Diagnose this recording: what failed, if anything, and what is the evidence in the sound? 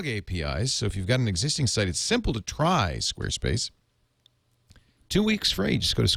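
Nothing in the recording points to a failure at any stage of the chain. The speech carries no audible defect that could be traced to wiring, conversion, processing, transmission, storage or playback.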